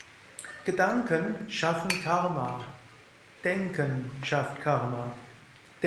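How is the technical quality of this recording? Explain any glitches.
The technical quality of this recording is sound, with no glitches to explain.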